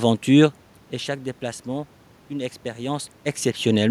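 No technical faults are audible.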